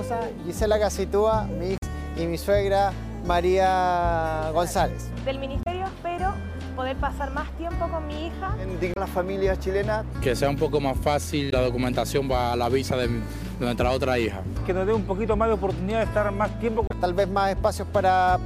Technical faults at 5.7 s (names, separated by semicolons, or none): damaged data in a compressed stream